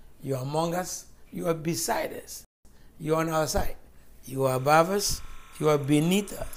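The audio drops to silence from 2.45 to 2.65 s and then picks up exactly where it stopped. This rebuffering stall adds 203 ms as playback waits for more data. From 4.53 s to the end, a steady chirping warble near 1 and 2 kHz sits roughly 25 dB below the sound. This is timecode bleed, a 30-frame-per-second linear timecode signal leaking in from an adjacent track or cable.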